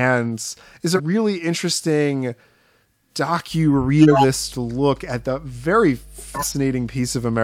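At 0.95 to 1.00 s, compressed frames are skipped: whole blocks of coded audio never reach the output, so the speech jumps forward by roughly a tenth of a second.

From 3.49 s to the end, mains hum sits under the speech as a steady 50 Hz tone with low harmonics, about 25 dB below the signal. This points to power-line interference entering the chain, such as a ground loop or a nearby transformer.

At 4.02 to 4.24 s, a corrupt frame is decoded. Damaged bits in a handful of consecutive frames were played anyway, so misread gains and codes put energy in the wrong frequency bands. The result is a short burst of misplaced sound.

At 6.34 to 6.55 s, frames are skipped again, dropping around 150 ms of speech.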